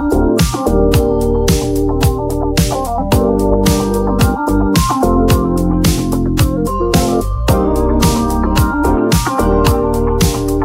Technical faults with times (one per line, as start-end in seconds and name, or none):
none